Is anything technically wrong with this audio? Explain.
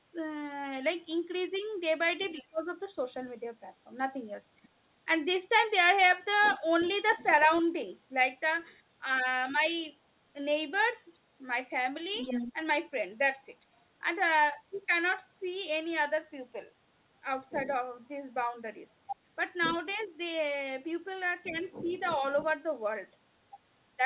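Yes, the clip is speech with two kinds of fault.

The other side's voice leaks through at 2.2–2.44 s, 4.63–4.68 s, 6.42–8.75 s, 12.14–12.53 s, 17.5–19.79 s and 21.44–22.53 s. A second talker sits beneath the main speech, faint in the early bursts, about 10 to 20 dB down in the longer stretches, and nearly as loud as the talker at 12.14 s. This is likely residual echo: the far end plays through a loudspeaker, and the echo canceller leaves part of it in the microphone signal.

Speech is suppressed in double talk from 2.34 to 2.68 s, overlapping the first leak. The talker's level falls by up to about 25 dB for roughly 300 ms in total, so the voice dips while the far side is playing. The mechanism is likely the echo canceller failing to separate near-end speech from echo during overlap and attenuating both together. Nothing above 4 kHz is present, which is the expected narrowband limit of the G.711 call path.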